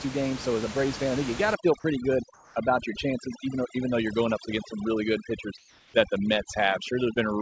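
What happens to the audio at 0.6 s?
Nothing goes wrong at 0.6 s: the speech passes through intact, with only the steady room noise beneath it and the usual band limit of the call path.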